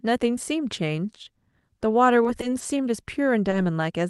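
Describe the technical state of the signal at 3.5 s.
Short concealed packet loss at 3.50–3.54 s: roughly 20 ms never arrived, so the decoder extended the preceding sound and blended back, leaving a brief smear.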